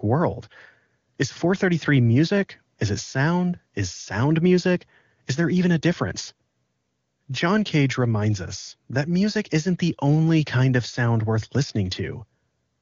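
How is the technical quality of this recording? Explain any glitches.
No glitches to point out here: the speech comes through the AMR wideband (HD Voice) codec at its top rate of 23.85 kbit/s without anything going wrong along the way.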